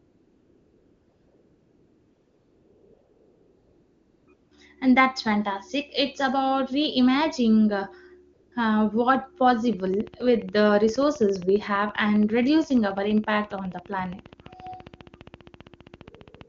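AMR comfort noise fills 0 to 4.27 s, 4.33 to 4.51 s (just before "and that's fantastic") and 8.33 to 8.51 s: with no speech frames arriving, the decoder substitutes smooth synthetic noise for the real background of this speech clip, so the room tone switches abruptly. A train of clicks runs from 9.73 to 16.42 s, about 100 similar ticks at a regular 14.8 per second, peaking roughly level with the speech and likely caused by electrical interference or a faulty connection, over clear AMR wideband (HD Voice) coding.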